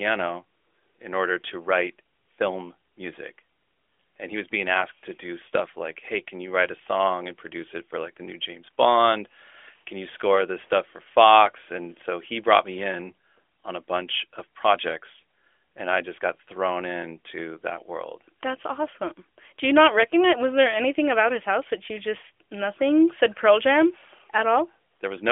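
No technical faults can be heard in the speech, which comes through the AMR narrowband mobile codec with nothing above about 3.5 kHz and only the light coloration that fits its highest-rate 12.2 kbps mode.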